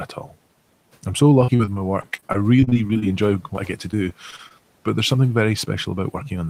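A speech recording with faint room noise sitting roughly 30 dB below the voice. Between 0.09 and 0.33 s the sound dips and goes faint for about a tenth of a second in total, falling by about 9 dB: speech cut by the noise suppressor, which mistook those quiet parts for background noise and turned them down. From 1.41 to 3.04 s, right after "I'm so", the audio turns choppy and robotic with bits missing, and this returns from 3.56 to 4.52 s, just before "but there's something very". Both stretches are repeated packet loss. Many short gaps, the longest about 37 ms in the first run and 25 ms in the second, were patched by stretching the preceding sound, covering about 22% and 10% of each span respectively.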